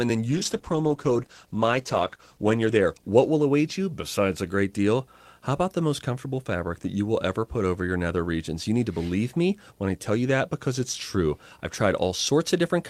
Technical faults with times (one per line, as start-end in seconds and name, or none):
0.00-12.89 video or display buzz
0.33-4.07 call bitrate drop